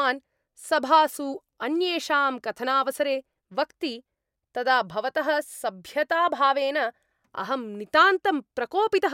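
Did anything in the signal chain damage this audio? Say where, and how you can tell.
No, nothing along the chain from capture to playback has audibly damaged this speech recording.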